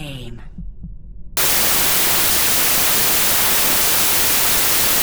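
At 1.37 s the sound turns into loud, harsh noise that runs to the end. This is wrong sample width: data stored as packed 24-bit samples are being read as 32-bit ones, so each value straddles neighbouring samples and only some keep the true top bits. The buried original plays about 1.33 times too fast and correspondingly higher in pitch. A plain sample-rate error would shift speed alone, without the roaring noise floor.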